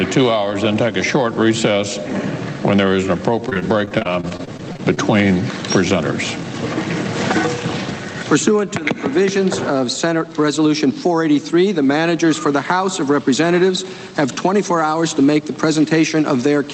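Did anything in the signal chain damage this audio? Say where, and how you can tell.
Yes. Between 3.49 and 4.99 s the sound turns choppy and robotic, the signature of repeated packet loss on the network. A fast train of short holes, none longer than 26 ms, is patched by extending the preceding sound, so about a fifth of that stretch is synthetic fill, with the Opus call path's 8 kHz band limit audible throughout.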